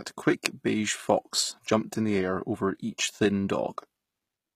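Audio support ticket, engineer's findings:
Sibilants gritty, lispy, metallic; treble extended but synthetic-sounding, harmonics not lining up above the crossover. Throughout, 0 to end of clip. Likely HE-AAC compression: lower band coded, treble rebuilt by spectral band replication from copied lower bands under a coarse envelope. Damage plainly audible, consistent with a very low bitrate, around 20 kbps.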